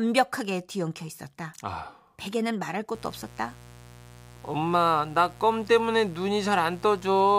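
From 2.95 s to the end of the speech, a steady, raspy mains buzz sits about 20 dB below the voice: 60 Hz interference with sharp spikes twice per cycle, harmonics reaching several kHz. Unlike smooth hum, its gritty edge comes from those spikes.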